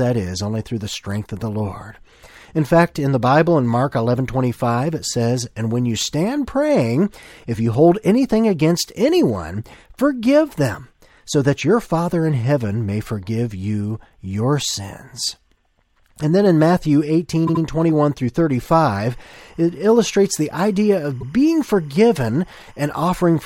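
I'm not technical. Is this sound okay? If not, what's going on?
No, not quite. There are two problems.

The first is repeated frames. At 17.46 s, a tiny slice of the speech, about 78 ms long, plays three times in a row. It sounds like a quick stutter. The same thing happens at 21.20 s, where the slice plays twice. The file stored or sent those bits of audio more than once. The speech runs slightly long as a result.

The second is timecode bleed. From 18.73 s to the end, a faint chirping warble sits behind the speech. It flips between two pitches, around 1 kHz and 2 kHz, in a pattern that repeats 25 times a second. This is a timing signal used to keep recording equipment in sync. It leaked into the audio from a nearby cable or track. It is quiet, well below the speech, but you can hear it.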